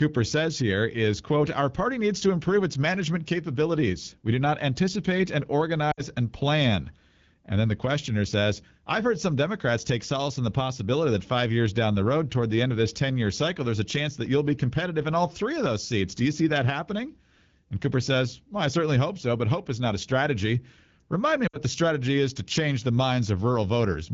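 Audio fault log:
5.91–6.03 s, lost AMR speech frames: after "do not anticipate and", about 60 ms (three 20 ms frames) is rebuilt from the last good pitch and vocal-tract settings at falling gain. The sound sags to near silence before "and plan". On a spectrogram the harmonics run flat and dim; the waveform envelope shrinks.
21.47–21.59 s, lost AMR speech frames: the same roughly 60 ms concealment just before "the strategy is to". It is heard as a brief drop to near silence, shown as frozen, fading harmonic bands and a narrowed waveform, with speech returning weak or rough for a moment.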